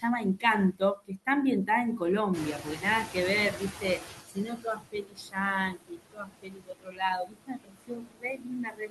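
Across this speech recording the background pumps down in the pauses and swells back under each phrase. These are noise suppressor artifacts: the processor estimates steady noise and pulls those bands down by about 16 dB frame by frame, so the residue shifts as the estimate does. From 2.33 s to 4.55 s the noise comes through stronger and then gradually sinks. That is the noise suppressor catching up. The room noise jumps by about 12 dB around 2.5 s, ending up roughly 10 dB below the speech, and the stale estimate takes about 2.2 s to adapt before it again cuts about 17 dB. Parts of the speech itself also sound swallowed or faint, at 0.72–1.27 s, 2.59–2.84 s, 3.52–3.83 s, 3.99–4.09 s, 4.27–5.37 s and from 5.69 s to the end. This is speech cut by the noise suppressor: it mistakes soft consonants and quieter stretches for noise and turns them down with the background, by about 9 to 11 dB in the milder spots and about 20 to 22 dB in the worst.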